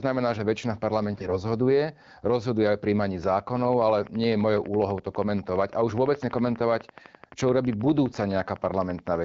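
From 1.14 to 1.38 s the speech turns briefly hoarse and gargly, the sound of AMR bit errors. On a weak link roughly a tenth of the less protected bits in each frame arrived flipped while the checksum on the core bits still passed, so the excitation pulses and the fine pitch, gain and spectral values were decoded wrongly. The span fits around eleven 20 ms frames. Pitch and level hold, which separates this from dropped frames, which would leave gaps or muted stretches.

From 3.24 s to 9.16 s a train of clicks runs at a steady 12 per second, about 70 near-identical ticks peaking about 5 dB above the signal. They continue through pauses, so the decoder is not producing them, and the AMR wideband (HD Voice) coding around them stays clear. Unlike random crackle, the even spacing points to a periodic source, likely interference from nearby equipment or a faulty connection.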